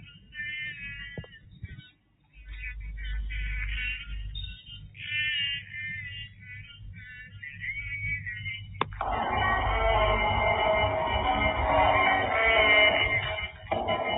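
Level rises and sinks by about 10 dB throughout, in a pumping, fluttering way: sudden onsets come through, while held tones, ambience and decaying tails are pulled down and thinned. This is a noise suppressor applied to music or sounds. A processor tuned for speech treats steady, sustained material as background noise and keeps turning it down.

The sound is cut by the noise suppressor at six points:
• 0 to 0.36 s, sinking by as much as about 15 dB
• 0.74 to 2.48 s, the deepest at about 16 dB
• 4.54 to 4.99 s, about 10 dB
• 6.23 to 7.63 s, about 13 dB
• 8.57 to 8.97 s, about 7 dB
• 13.48 to 13.71 s, about 12 dB

In each, sustained or fading content sinks and its decay ends early.

Everything above 4 kHz is missing, with the fine grain of a G.711 mu-law call path, which fits a 64 kbps stream.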